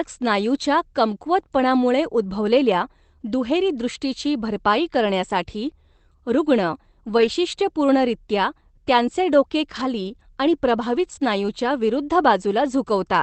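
Speech over what sounds like an Opus call path, with three spots where lost packets were rebuilt from error correction: 7.17–7.27 s, 9.75–9.85 s and 10.95–11.25 s. There are no gaps, but those stretches turn rougher and noisier as the decoder plays the low-bitrate backup copies. The last one runs about 160 ms.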